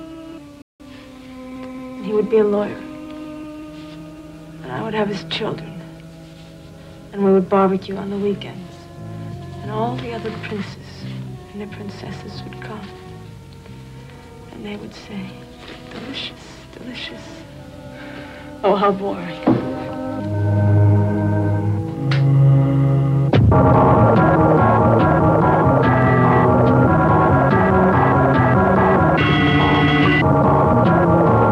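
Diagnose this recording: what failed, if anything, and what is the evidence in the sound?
The playback stage failed with a playback stall. From 0.62 s to 0.80 s the sound stops mid-flow and the output goes silent for about 178 ms before continuing. The likely cause is the player running short of data or its thread being blocked, so nothing reached the output until it recovered. What separates this from a momentary dropout or click is its length: a sustained gap of nearly a fifth of a second rather than a few-millisecond break.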